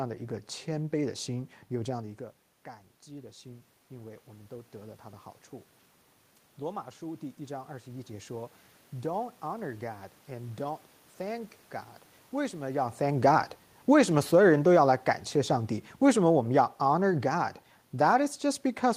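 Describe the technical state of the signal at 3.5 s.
At 3.5 s the automatic gain rising is under way, spanning 3.06 to 5.33 s: after the input fell by about 15 dB, the gain control climbs about 5 dB. Unlike a talker moving closer, the room noise swells along with the voice.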